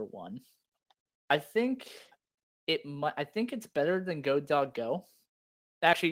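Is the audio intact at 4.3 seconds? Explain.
Yes, the speech at 4.3 seconds plays through without any audible fault.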